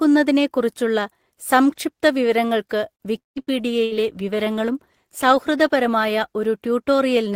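At 2.95 to 3.03 s the speech hangs on one sound for about 45 ms with a faint buzz, then carries on without a gap. This is a short stall from a late packet: the jitter buffer ran empty and the receiver stretched the last sound until the packet arrived.

From 3.18 to 3.39 s a buzz fades away and is followed by about 0.15 s of silence, with roughly 180 ms of speech gone. This is likely a long network dropout.

Beginning at 3.34 s and lasting until 6.43 s the speech turns rough and watery. This is a call bitrate drop from 32 to 18 kbps, which held its lowest rate for about 2 s, so the encoder coded more coarsely.

Inside that stretch, at 3.42 to 3.62 s and again at 3.85 to 3.94 s, the sound becomes a brief decaying buzz or hiss of about 50 and 62 ms. Each is a burst of packet loss, and about 60 ms of speech is skipped in each one.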